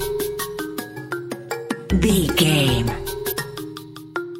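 At 0.93 to 0.97 s and again at 3.28 to 3.33 s, damaged data in the compressed stream produces a brief disturbance lasting about 44 ms. Corrupted bytes leave the decoder misreading frames and losing sync until it locks onto the next valid frame header.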